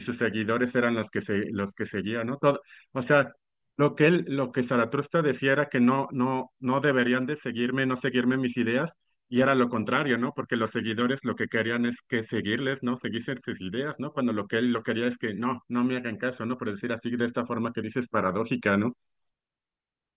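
No technical faults are audible.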